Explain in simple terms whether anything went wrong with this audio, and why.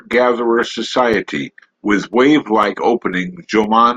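Periodic USB or driver dropouts, from 0.13 to 3.64 s: every half second a few milliseconds of the speech vanish into silence, heard as regular ticks.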